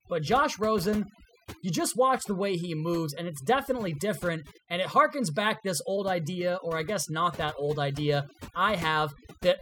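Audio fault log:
Throughout, overdone noise removal: a noise reducer set too strong mutes bands near its noise estimate, leaving a lowered background with twinkling specks.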